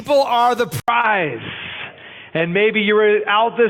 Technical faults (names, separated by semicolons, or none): input switched to a poorer device; short concealed packet loss